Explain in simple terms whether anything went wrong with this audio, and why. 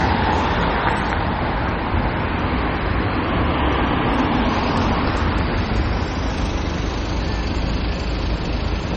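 Something did go wrong, and it runs through the whole clip. Nothing comes through above about 8.3 kHz, so the top end sounds dull and a bit muffled from start to finish. That's most likely low-bitrate audio saved at a high bitrate: the sound was squeezed hard into a small MP3 first, which threw away the highs, then saved again as a much bigger MP3. The bigger file can't bring back what the first one discarded.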